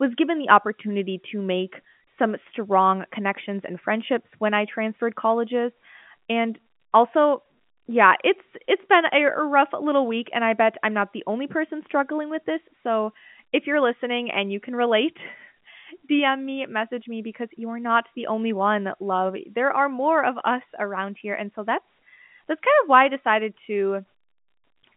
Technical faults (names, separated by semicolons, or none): none